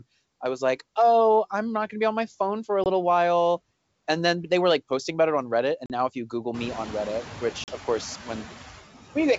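Throughout, a noise suppressor attenuates bands it judges to be steady noise by about 13 dB frame by frame, so the background dips between phrases and swells under speech, most noticeably once the room noise rises around 6.5 s. Packet loss on the ADPCM call blanks the stream and knocks the decoder's predictor out of step: at 2.84 to 2.87 s, after "my phone for a", roughly one packet (20 ms) goes missing; then at 5.86 to 5.92 s, before "now if you", and 7.64 to 7.71 s, before "of course", about two packets (40 ms each). Each gap is a hard-edged hole followed by briefly, slightly distorted speech.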